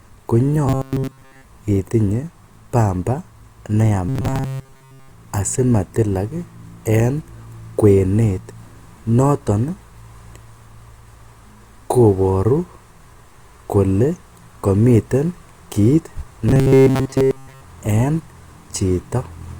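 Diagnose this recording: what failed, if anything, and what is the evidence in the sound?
Robotic sound from repeated short buffers, at the driver or buffer stage. Speech turns to a rigid 133 Hz buzz from 0.67 to 1.44 s, before "itinye pamba", 4.09 to 5.11 s, and 16.49 to 17.61 s, after "komiten kiit". Likely a starved buffer looping 7.5 ms chunks, replacing most real audio.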